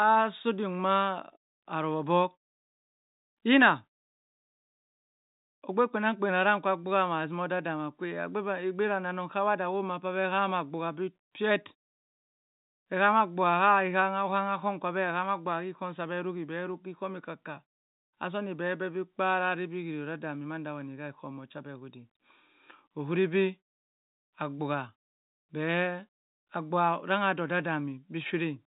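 No technical faults occur at any point in the speech.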